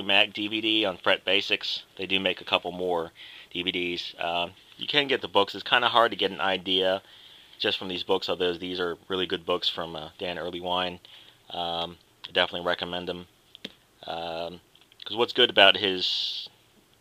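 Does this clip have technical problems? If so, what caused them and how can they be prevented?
No, there are no technical problems to report here.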